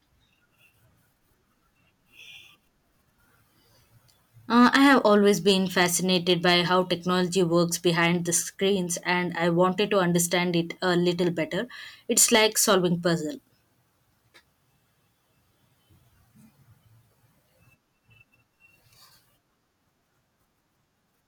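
Hard clipping breaks into the speech three times: from 4.61 to 6.93 s and from 12.18 to 12.74 s with the level driven about 6 dB past what the stage can pass, and from 7.87 to 8.36 s with about 2 dB of overload. Peaks are sliced flat, so loud syllables turn to a harsh fuzz in the heavier sections and a lighter crackle in the middle one. The waveform shows squared-off tops, and the spectrogram shows bright smears of harmonics reaching high up during each burst.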